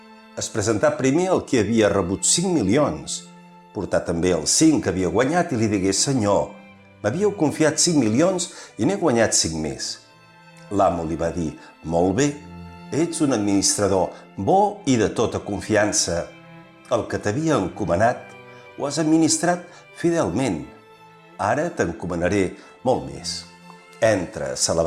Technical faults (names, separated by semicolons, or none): none